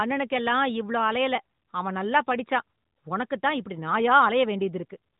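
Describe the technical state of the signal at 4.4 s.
At 4.4 s the audio is intact, with no fault, just the narrowband telephone-style sound of the AMR narrowband mobile codec, which carries nothing above about 3.8 kHz.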